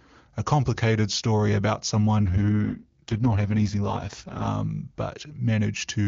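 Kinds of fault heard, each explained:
AMR rate drop: From 2.26 to 4.48 s the speech turns rough and synthetic, with no gap. That fits AMR-WB stepping down to 6.6 kbit/s.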